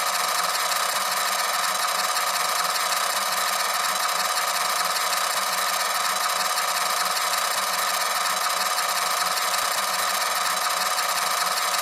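From 9.06 s to 11.23 s the sound carries periodic USB or driver dropouts: about forty tiny gaps, one every 0.064 s, where a sliver of audio far shorter than a millisecond is skipped outright and the waveform jumps ahead. Each splice leaves a small step discontinuity, heard as an even, rapid ticking over the signal. On a spectrogram this shows as a comb of thin, evenly spaced vertical broadband lines. In the waveform it shows as abrupt kinks at regular intervals.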